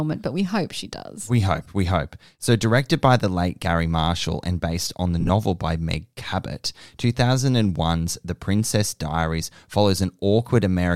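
At 1.63 to 1.66 s there are lost LE Audio frames, about 22.5 ms of them, which fits 7.5 ms LC3 frames. The decoder patches the gap by reusing the last spectrum with random signs, so the sound briefly smears into noise. It happens again right after "and based on the", at 5.20 to 5.30 s, where 52.5 ms of losses are scattered across 90 ms in short runs of about 15 ms at most, giving brief noisy smears rather than a dropout.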